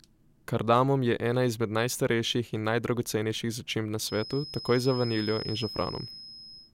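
At 3.97 s a thin, steady feedback whistle at 5.1 kHz appears behind the speech and continues to the end of the clip, sitting about 15 dB below the voice and swelling and fading slowly in level. The likely cause is a loudspeaker-to-microphone loop held just short of runaway, so one frequency keeps ringing without growing. On a spectrogram it is a single narrow horizontal line at 5.1 kHz; the waveform barely shows it beneath the speech.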